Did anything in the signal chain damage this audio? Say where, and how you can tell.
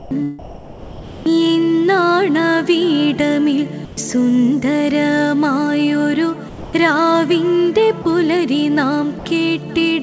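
Yes, at the call-processing stage. Six times the audio gives way to a flat, steady hiss and then comes back: 0.00–0.11 s, 0.39–1.26 s (the longest, nearly 0.9 s), 3.85–3.97 s, 6.49–6.73 s, 8.02–8.05 s and 9.19–9.25 s. This is most likely sound dropped by the voice detector. The sender took these stretches for background and stopped transmitting, and the receiver filled each gap with generated comfort noise until the detector triggered again.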